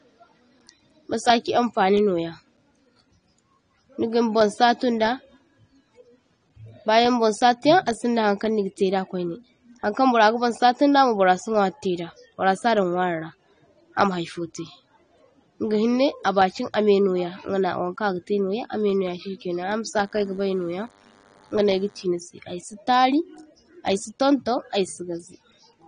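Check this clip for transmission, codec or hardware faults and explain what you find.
Two faults are present: codec damage across the whole clip and a short burst of radio interference.

Throughout, the speech is dull and smeared, with nothing above 9.7 kHz and a fizzy warble on sibilants, most likely AAC compression at a low bitrate near 32 kbps. The frame coder quantises frequency lines too coarsely, dropping highs and leaving spectral holes. A simple low-pass filter would cut cleanly without this texture.

From 20.05 to 22.05 s, ending just before "aysi tari", a faint, thin buzz sits well below the speech. This is DECT cordless phone buzz: a nearby handset's radio bursts every 10 ms are rectified into a 100 Hz tone rich in harmonics. Mains hum is smoother and sits at 50 or 60 Hz.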